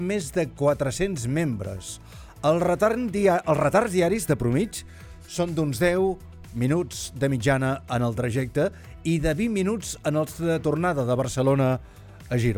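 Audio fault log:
No faults were heard in this audio. Nothing in it calls for a timed entry in this log.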